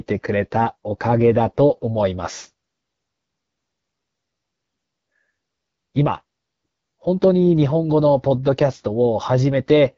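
Speech coded throughout with the AMR wideband (HD Voice) codec at a low rate, which fits its 8.85 kbit/s mode, sounds plainly rough and raspy, with nothing above 7.2 kHz.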